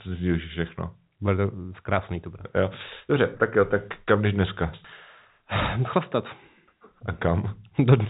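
Nothing stood out on listening to this speech, which carries the narrow telephone band of G.711 coding with nothing heard above about 3.8 kHz.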